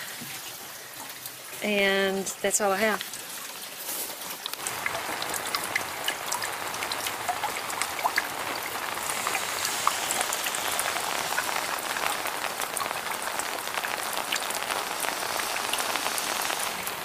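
At 1.79 s there's a single sharp click, and it sounds like a case of dropped samples. A tiny slice of the stream, well under a millisecond, has likely gone missing, so the waveform leaps straight from one value to a later one instead of moving smoothly between them. Nothing audible is actually lost; you just get that abrupt step, heard as a quick tick and seen as a thin vertical line running up the spectrum.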